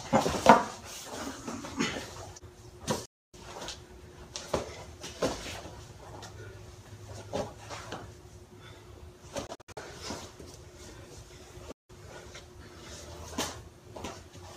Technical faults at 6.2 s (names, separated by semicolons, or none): none